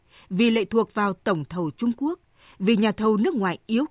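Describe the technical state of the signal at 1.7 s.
At 1.7 s the speech signal is intact, with no audible fault at that moment.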